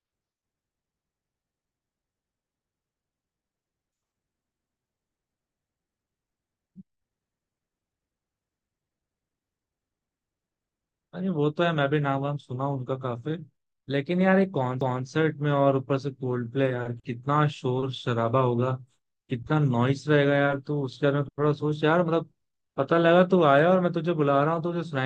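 A stutter breaks into this speech recording twice, at about 4.56 to 4.81 s and again at 14.81 to 15.06 s, where a quarter-second stretch of sound plays through and then immediately plays again. This is overlapping chunks: the audio was handled in 10-second blocks, and each new block began 250 ms before the previous one had finished, so the shared stretch at every join is heard twice.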